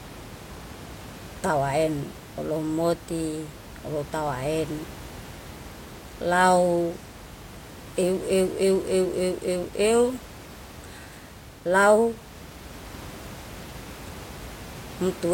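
No technical faults are audible.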